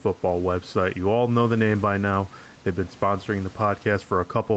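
Gain pumping runs throughout: the level swings roughly 5 decibels under loud syllables, likely a fast limiter fighting too much mic gain.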